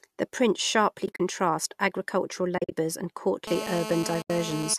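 At 1.06–1.20 s and again at 2.58–2.72 s the speech breaks up with AAC frame loss with muting. In each span, short dropouts are scattered across about 140 ms, adding up to 90 ms and then 110 ms of silence, with the longest gap around 40–50 ms. The decoder zeroes the missing frames and the overlapping windows fade the audio down and back up, so the holes have soft edges. The hole lengths fit short frames of about 10 ms, which points to the likely codec, low-delay AAC-ELD.

From 3.47 s to 4.74 s a GSM phone buzz sits under the speech at about 8 dB below it. A 2G handset on a call is transmitting in bursts at 217 Hz, and the audio circuitry rectifies those radio pulses. The result is a hard, raspy, harmonic-rich drone that holds steady and has no relation to the speech. A third muted dropout of 80 ms at 4.22–4.30 s cuts the speech.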